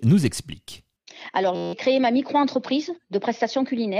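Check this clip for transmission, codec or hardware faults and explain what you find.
One hardware fault is present. From 1.56 to 1.73 s there is a system hang loop: the host stalled while the audio device kept replaying its ring buffer. An 11.61 ms slice, which fits a 512-sample buffer, repeats 15 times, producing a steady 86.1 Hz buzz in place of the speech, with roughly a fifth of a second of audio lost.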